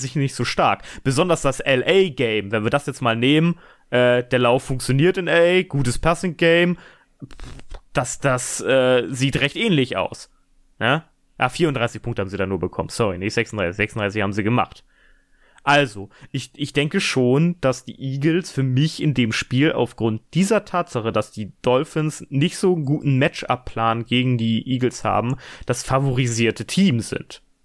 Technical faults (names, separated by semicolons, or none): none